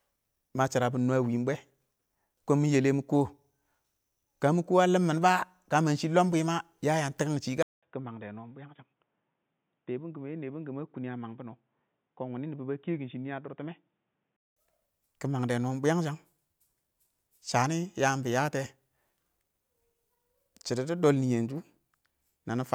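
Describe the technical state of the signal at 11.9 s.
At 11.9 s the sound is dull and boxy, inside a stretch from 7.63 to 14.57 s, likely an input switched to a poorer device. Nothing passes above 3.8 kHz, the level sits a few decibels lower, and a faint new noise floor appears. A 200 ms silence at the switch sets it apart from plain low-pass filtering.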